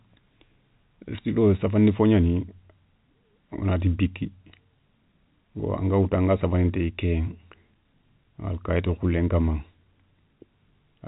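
Speech over G.711 telephone coding, with no faults heard.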